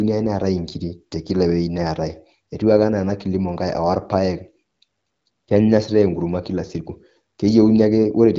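No faults found; the speech runs over AMR-WB at 12.65 kbit/s, with its band stopping at about 7.6 kHz.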